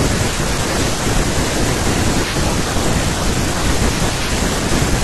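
A short glitch cuts into this speech clip from about 3.73 to 3.78 s, lasting roughly 44 ms. It comes from damaged data in a compressed stream: corrupted bytes made the decoder misread those frames and lose sync until it found the next valid frame header.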